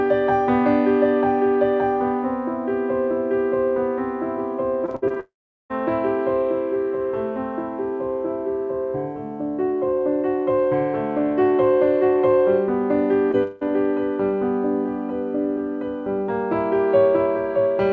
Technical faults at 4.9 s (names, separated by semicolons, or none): repeated packet loss (robotic sound)